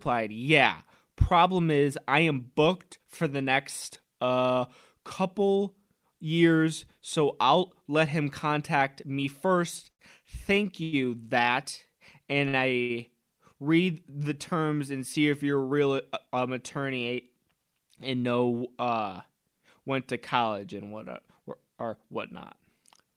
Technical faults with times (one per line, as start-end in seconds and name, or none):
9.90-10.01 short stall from a late packet
10.83-11.06 short stall from a late packet
12.48-12.55 short stall from a late packet
12.81-12.91 short stall from a late packet
15.49-16.36 jitter buffer speed-up
22.69-23.16 jitter buffer speed-up